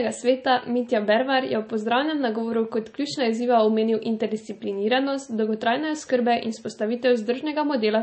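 Throughout the speech there's a hard treble ceiling at 8.4 kHz and a watery, swirly texture on the s sounds, likely MP3 compression at a low bitrate, around 32 kbps.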